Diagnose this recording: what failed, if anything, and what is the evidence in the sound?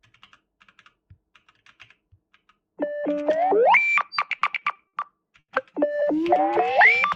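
Repeated stalls (stutter) at the network stage, 4.25 to 4.95 s: five jitter-buffer underruns filled 140 ms with held sound. Nothing is lost, so it drags rather than skips.

A short stall from a late packet at 5.39 to 5.50 s: one 90 ms delay jump held the sound, then playback resumed in place. It is a single stretch, not a stutter train.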